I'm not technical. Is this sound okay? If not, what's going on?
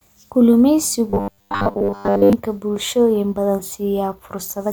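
No. From about 1.10 to 2.33 s the speech turns into a rigid, metallic buzz at around 100 Hz: robotic sound from repeated short buffers. Most of that stretch is likely a tiny 10 ms scrap replayed over and over while fresh audio arrives too late.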